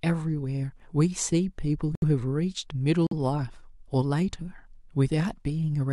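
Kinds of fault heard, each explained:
Corrupt frame muted: damaged compressed frames got rejected by the decoder and the player dropped in silence instead, so the speech cuts out abruptly for about 80 ms at 1.95 s and about 66 ms at 3.07 s, each gap fitting a few lost frames, with timing intact afterwards.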